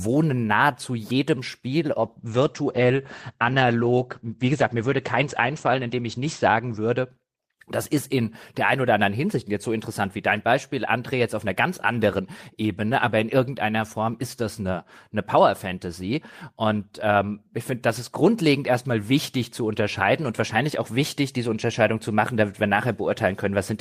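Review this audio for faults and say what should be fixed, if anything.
A call bitrate drop from 2.04 to 7.15 s: the bandwidth estimate fell and the encoder was throttled, coding at a rate that sounds like about 12 kbps, down from 32, for roughly 4.4 s. The speech turns coarse and watery, with the top end cut from 20 kHz to 8 kHz, muffling it until just before "das ist in der". Prevent it by smoothing bandwidth estimation and setting a higher minimum bitrate floor.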